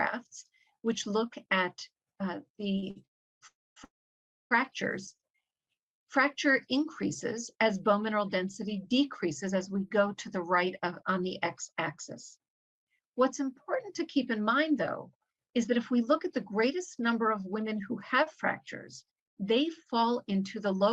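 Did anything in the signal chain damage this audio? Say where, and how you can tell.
Yes, the damage comes from network delay and the receiver's jitter buffer.

At 2.79 s and 2.90 s the sound briefly hangs, held about 30 ms and 51 ms too long. These are short stalls from late packets, bridged by stretching the last sound.

Call audio freezes at 3.06 to 3.43 s, 3.47 to 3.78 s and 3.84 to 4.53 s each fade to near-silence (350, 240 and 610 ms), likely packets held up in transit.

From 5.31 to 6.06 s the sound drags at 86% speed with unchanged pitch. This jitter buffer slow-down repeated pitch periods, adding 112 ms to rebuild its reserve.

Between 8.14 and 13.00 s (103%) and 16.25 and 20.88 s (105%) the audio runs faster at the same pitch. A jitter buffer speed-up trimmed roughly 200 ms and 300 ms.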